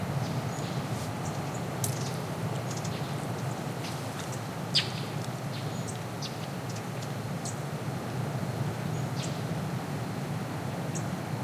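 Just a recording of everyday sounds, and there's nothing technically wrong to flag anywhere in it.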